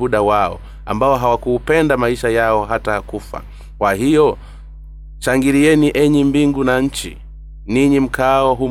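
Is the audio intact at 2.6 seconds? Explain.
No. At 2.6 seconds, as throughout the clip, mains hum sits under the speech: a steady low 50 Hz tone, roughly 20 dB below the signal, from power-line current leaking into the audio path through a ground loop or a nearby transformer.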